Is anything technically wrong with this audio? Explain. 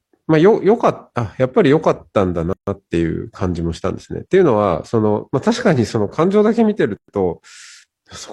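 Yes. There are two gaps at a join of encoded pieces. The speech was encoded in separate sections and spliced without trimming, so each join keeps the encoder's start-up delay and the padding of the previous section's last frame. The result is a break in continuous speech from 2.53 to 2.67 s (about 143 ms) and from 6.97 to 7.08 s (about 116 ms), with edges smeared by the codec, after which the speech resumes where it stopped.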